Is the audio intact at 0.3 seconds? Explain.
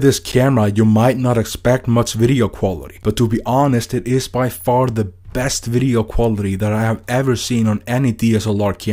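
No. At 0.32 s there is a block of digital silence lasting about 11.6 ms, which fits a 512-sample buffer. The output stops abruptly and resumes with no fade, either because the buffer was not filled in time or because a calculation produced invalid values. Being under 15 ms, it is heard as a tick or brief dip rather than a gap. Unlike a lone click, this is a true missing stretch of sound with hard edges on both sides.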